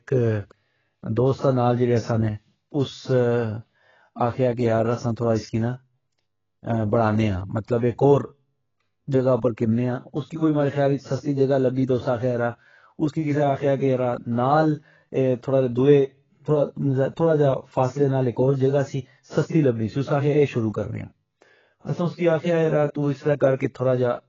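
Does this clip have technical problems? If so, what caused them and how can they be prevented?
Yes. The speech carries heavy AAC compression damage the whole way through. Nothing comes through above 7.5 kHz, and sibilants have a smeared, warbly texture. That fits AAC-LC squeezed to roughly 14 kbps, the likely cause. Encoding at a much higher bitrate would prevent it.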